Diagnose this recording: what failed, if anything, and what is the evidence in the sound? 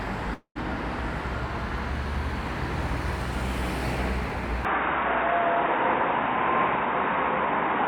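Network stage: from 0.34 to 0.57 s the sound dissolves into a fading buzz, then about 90 ms of silence, likely a long network dropout. The fading fill, not a hard cut, separates it from a storage gap.

Capture stage: from 4.65 s to the end, nothing passes above 3.8 kHz, the level shifts by about 5 dB, and a new noise floor sits roughly 35 dB down. This is likely an input switched to a poorer device, not a codec change, because the tone, level and noise all change together.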